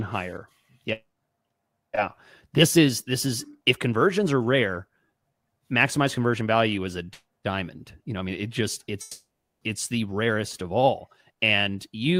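From 9.01 to 9.64 s the sound decays into a fading buzz, then silence, and returns with 0.6 s lost, likely a long network dropout.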